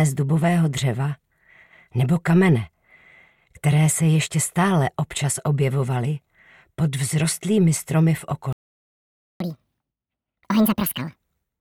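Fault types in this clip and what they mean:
Playback stall: The sound cuts to silence at 8.53 s for about 0.88 s. The player likely ran out of data or was blocked.
Catch-up at higher speed: From 9.40 to 11.16 s the backlog plays 1.5 times fast. Pitch rises about seven semitones, then returns to normal.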